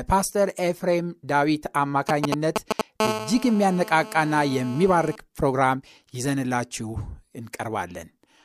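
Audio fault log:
2.09–2.81 s, GSM signalling bursts: a galloping dit-dit-dit of short buzzes sitting somewhat above the speech level. A nearby 2G phone is handshaking with the network, sending short groups of radio bursts that the audio circuitry rectifies into audible 217 Hz blips.
3.00–5.16 s, GSM phone buzz: a steady, raspy 217 Hz buzz full of harmonics, about 9 dB below the speech and ignoring what's being said. The phone is now in a call, transmitting bursts 217 times a second continuously, and the circuit demodulates that pulse train straight into the audio.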